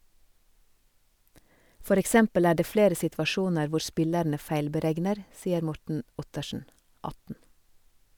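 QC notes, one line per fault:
Nothing to flag here; the speech comes across without any technical problems worth noting.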